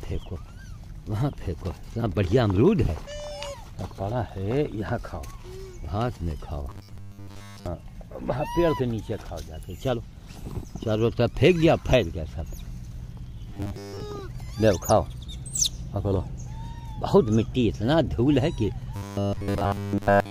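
From 6.70 to 7.67 s, 13.50 to 14.00 s, and 18.96 to 20.30 s, the sound turns into a rigid, metallic buzz. This is robotic sound from repeated short buffers. It is likely caused by audio arriving too seldom, so a 10 ms slice gets replayed in place of the missing material. That repetition imposes a fixed 100 Hz pitch. The first two stretches are mostly repeats. The last is repeats throughout.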